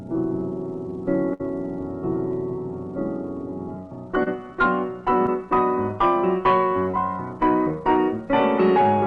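At 1.33 to 1.41 s there is a burst of packet loss. About 60 ms of audio never arrived, and the receiver extended the last sound for about 59 ms while turning it down. This produces a held, decaying buzz or hiss. The sound then picks up further along with that stretch gone. It differs from the later dropouts because it is long enough to hear as a fading sustain followed by a jump.

Three short concealed packet losses follow, at 4.23 to 4.28 s, 5.26 to 5.29 s and 6.91 to 6.95 s. Each time, about 20 ms failed to reach the decoder in time. The receiver filled the gap briefly, for about 28, 12 and 20 ms respectively, by continuing the preceding sound, and then blended back into the real audio. Each one is heard as a quick smear or wobble rather than an audible fade. Unlike the burst, none is long enough to sound like a held tone.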